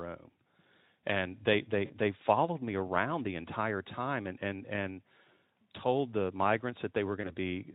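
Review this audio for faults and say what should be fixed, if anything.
VoIP packet loss concealed by the speech codec occurs twice: at 1.85–1.93 s, between "they they" and "followed me around the", about 40 ms of audio is missing, which fits two lost 20 ms frames; at 7.21–7.35 s about 20 ms is missing. The Speex decoder repeats its last pitch and filter, so each gap becomes a buzzy tone or coloured noise that fades and stays weak for a while after packets return. A plain dropout would instead give silence or a click. A jitter buffer and forward error correction would prevent it.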